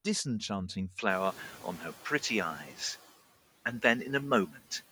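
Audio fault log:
0.99 s to the end, input switched to a poorer device: the sound turns duller from here on, with a narrower band and faint new background noise about 35 dB down. There is no gap and no real level jump, likely a switch to another microphone.
1.09–2.66 s, noise suppressor catching up: the room noise jumps by about 22 dB near 1 s and at first comes through with less reduction, then sinks over 1.57 s as the suppressor's noise estimate adapts and takes about 6 dB off it.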